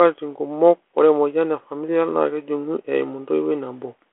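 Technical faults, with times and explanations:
Nothing stood out on listening to this speech, which comes through the narrow band of a 32 kbit/s G.726 telephone line.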